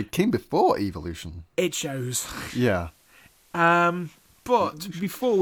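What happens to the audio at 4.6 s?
The radio has lost its digital signal and is in a digital radio blending to analogue state from 1.63 s to 4.94 s, running on the FM broadcast. At 4.6 s the speech carries faint hiss well below it and an unchanged level, before a 395 ms cross-fade returns to digital.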